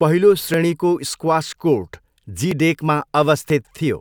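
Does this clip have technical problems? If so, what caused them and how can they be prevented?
Yes. Brief skips at 0.54 s (just before "स्क्वास कोर्ट"), 1.53 s, 2.51 s (just after "स्क्वास कोर्ट") and 3.50 s, spaced about 1 s apart, are likely audio missing between chunks: roughly 15 ms is dropped at each boundary and the sides are butted together. Preventing it requires gapless chunk handover with overlapping or continuous buffering.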